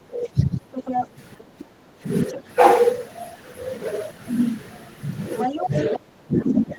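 Right at the start, from 0.06 to 0.68 s, the talker's speech sinks by roughly 15 dB for most of a second. That's speech suppressed in double talk, likely the echo canceller ducking everything while both ends spoke at once. From 0.74 to 1.64 s the other side's voice is leaking through, only about 5 dB under the talker; the residual echo likely got past the canceller. Overlapping that, from 1.44 to 2.0 s, the background is gated by the echo canceller, and the room tone drops by about 8 dB for around half a second before it comes back. At 2.28 to 2.38 s a faint scrap of leakage slips in, roughly 25 dB down, with a brief dip of about 5 dB in the talker at 2.34 to 2.4 s. Near the end the leakage returns at 5.39 to 5.96 s around 5 dB under, and from 5.5 s to the end the speech is pushed down by as much as about 25 dB.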